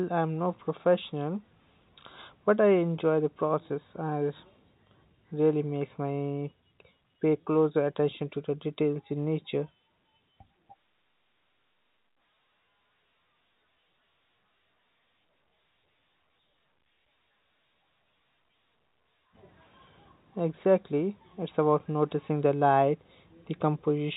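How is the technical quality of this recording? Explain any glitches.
No glitches to report: the speech sits within the telephone band of G.711 coding, with nothing above 4 kHz, and no faults can be heard anywhere in the recording.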